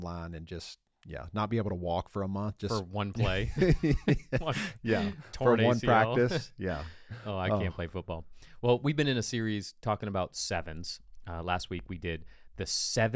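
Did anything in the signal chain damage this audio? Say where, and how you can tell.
No, nothing in this speech recording stood out on listening as a sign of damage from any stage of the signal chain.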